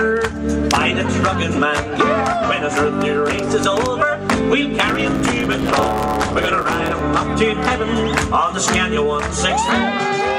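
From about 4.86 s to 7.02 s there's a block size mismatch, the truncated kind. One stage is handing over longer blocks than the next stage reads, so the tail of every block just gets dropped. You hear it as a buzz at the block rate, around 109 Hz, and the audio runs about 1.09 times fast, since that's the ratio between the two block sizes. The timbre holds up through it all.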